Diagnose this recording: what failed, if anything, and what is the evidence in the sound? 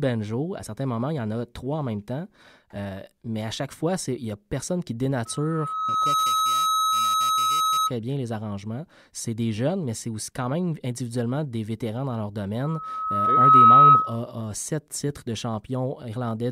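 Loudspeaker feedback squeal in the microphone–loudspeaker loop: a 1.3 kHz tone swells over about a second at 5.25–7.92 s and 12.64–14.20 s, after "n'y a personne qui" and "des vétérans dans leur", reaching about 5 then 15 dB above speech. Loop gain exceeds one there. Spectrogram: one bright horizontal line. Waveform: swelling envelope.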